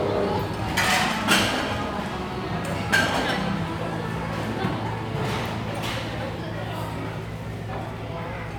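There are no technical faults to describe anywhere in this recording of everyday sounds.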